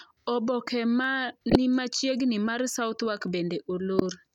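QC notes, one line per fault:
1.04 s, dropped samples: a single sharp click just before "ni machiegni mar". The likely cause is a handful of samples missing from the stream, well under a millisecond, so the waveform jumps abruptly to a later value. That step shows as a thin vertical line across the spectrum without removing any audible speech.
1.50 to 1.56 s and 3.95 to 4.02 s, corrupt frame decoded: brief error bursts peaking at about -10 dBFS. Damaged compressed frames were decoded anyway, and misread gains and codes put energy at wrong frequencies. The first burst spans a few frames, and the later one runs slightly longer.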